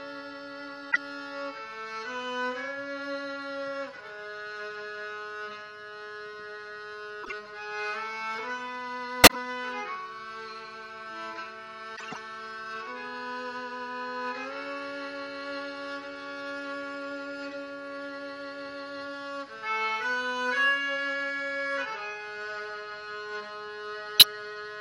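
Throughout, the sound has a watery, swirling quality. That is MP3 compression, plainly audible here. Weak detail flickers between frames. This likely comes from bits running short in an encode of about 64 kbps.

A corrupt frame decoded is heard at 0.91 to 0.97 s, 7.23 to 7.32 s, 9.24 to 9.36 s, 11.96 to 12.17 s and 24.18 to 24.24 s. Damaged data put energy at wrong frequencies. Each is a brief chirp or noise burst lasting a few frames. The one near 12 s runs longest. Peaks reach about -10 dBFS at their loudest.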